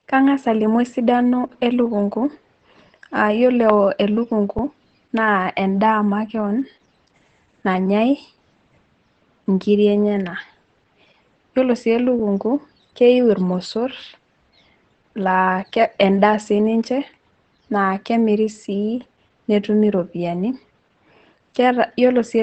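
Throughout, Opus voice compression at 12 kbps in SILK wideband mode leaves nothing above about 8.8 kHz, making the speech muffled, hoarse and faintly robotic. At 4.59 s, after "ore elukunku", and at 12.19 s, after "yiolo sii", an underrun with held sample freezes the output for 5 ms before playback resumes where it stopped, giving a brief flat hold with only a soft edge.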